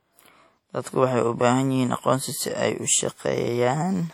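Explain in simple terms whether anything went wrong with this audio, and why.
Compression damage is plainly audible throughout the speech, likely from WMA compression. This kind of encoder smears its errors over tens of milliseconds, giving a ringing, washy quality and a hiss that rises and falls with the voice. Nothing remains above 18.1 kHz.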